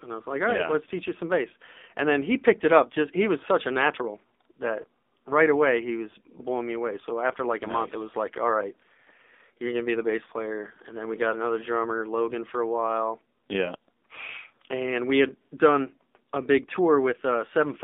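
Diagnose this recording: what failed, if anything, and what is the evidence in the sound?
The codec stage is the culprit here: this is AMR narrowband mobile codec audio all the way through. The speech sits in a band from roughly 250 Hz to 3.6 kHz, with a clearly buzzy, synthetic edge that fits a low AMR-NB mode around 7.4 kbps.

The network is next. At 4.82 s, between "such a natural that" and "right away he was", there's a brief warble, which points to lost AMR speech frames. The gap sounds like a single dropped 20 ms frame, and the decoder bridged it by reusing the previous frame's pitch and vocal tract settings.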